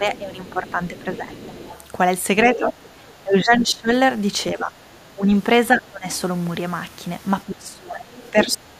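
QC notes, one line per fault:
0.0–1.56 s, 2.56–3.9 s, 4.54–6.06 s and 7.45–8.8 s, speech suppressed in double talk: the talker's level sags in uneven pieces, by about 15 dB in the earlier runs, about 20 dB in the third and about 25 dB near the end. The likely cause is an echo canceller that could not separate the two and turned everything down. Unlike a network dropout, the sound dips while the far side is playing.
0.15–1.86 s, 2.46–3.65 s, 6.12–6.17 s and 8.16–8.52 s, other side's voice leaking through: a second voice sits under the talker. It is most audible at 2.46–3.65 s, only about 10 dB down, and faint elsewhere, around 20 to 25 dB down. This is likely far-end loudspeaker sound that the echo canceller left in the microphone signal. It differs from room echo because it is a different voice with its own timing, not a delayed copy of the talker.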